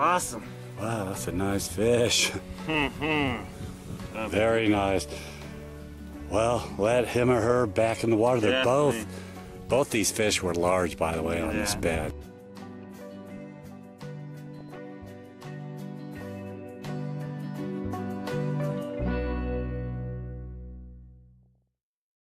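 Weak DAB reception let bit errors slip past the error correction into the MP2 audio stream, so corrupted samples and scale factors made individual sub-bands jump in level frame by frame. The result is DAB burbling: bubbling, squelchy chirps over the sound from 4.16 to 4.30 s, again more heavily from 14.47 to 14.79 s, and briefly from 21.43 to 21.46 s. The later bursts suggest an error rate of a few tenths of a percent.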